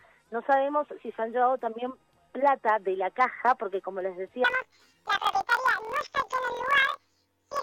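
From 4.44 s to the end, planar audio read as interleaved jumps an octave with a 43 Hz flutter, fitting 1024-sample blocks; unlike plain resampling errors, overall pace stays correct.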